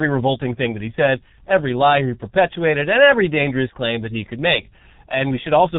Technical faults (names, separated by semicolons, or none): G.723.1 codec